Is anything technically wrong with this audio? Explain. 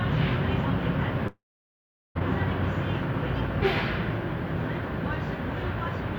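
Yes. From 1.27 s to 2.17 s there is a long network dropout: about 880 ms of audio never arrives, likely because packets were lost in transit. The receiver stretches the last sound into a fading buzz for roughly a tenth of a second, then leaves about 780 ms of silence before the sound resumes with the lost stretch missing. A spectrogram shows a brief smeared, repeating texture, then a blank band, then an abrupt restart; the waveform flattens to near zero in that gap.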